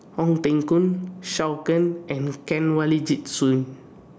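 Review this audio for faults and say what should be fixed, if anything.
Gain pumping runs throughout the speech. The gain swings by around 10 dB, so loud and soft parts sit squashed together. The likely cause is input gain set far too high, with a fast limiter or compressor pulling down each peak. The call microphone processing, which leaves nothing above 8 kHz, is not part of the problem. To prevent it, lower the microphone gain so peaks stay well below the limiter's threshold.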